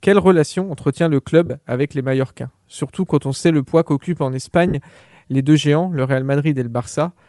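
A speech clip with a breathy, grainy edge throughout. The upper spectrum sounds thinned and partly replaced by noise. That points to Bluetooth LC3 compression, likely at a modest rate such as 48 kbps, with damage that is plainly audible. There are two bursts of lost LE Audio frames. The first runs from 1.46 to 1.50 s, lasting 40 ms. The second runs from 4.68 to 4.75 s, lasting 60 ms. In each gap the sound turns into a brief noisy smear. The decoder repeats the last spectrum with scrambled phase. The lengths fit four and six lost 10 ms frames.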